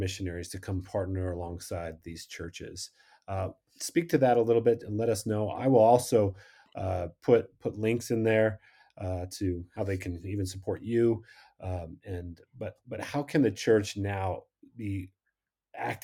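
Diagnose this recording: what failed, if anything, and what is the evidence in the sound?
Nothing in the signal chain failed: the speech recording holds steady level, continuous timing and intact bandwidth throughout, with no audible defect at any stage from capture to playback.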